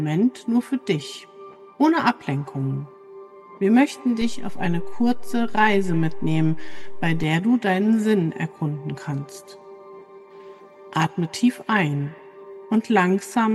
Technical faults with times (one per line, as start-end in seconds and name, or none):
4.22-7.24 DC step